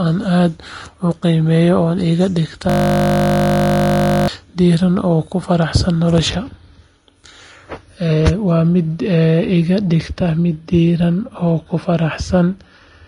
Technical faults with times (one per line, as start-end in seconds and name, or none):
0.00-13.08 Vorbis compression
2.70-4.28 system hang loop